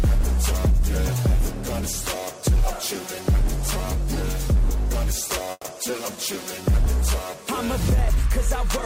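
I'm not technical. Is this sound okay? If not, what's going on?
No. Around 5.51 to 5.66 seconds there's a call audio freeze, most likely from data arriving late. The last sound stretches into a fading buzz or hiss, goes briefly silent, then resumes with nothing lost, just slightly delayed.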